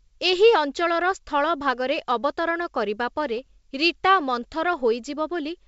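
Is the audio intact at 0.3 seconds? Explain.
Yes, at 0.3 seconds the speech is intact, with no fault at that moment, only the G.722 wideband telephone coding at 64 kbit/s passing it through with faint or no audible coding damage.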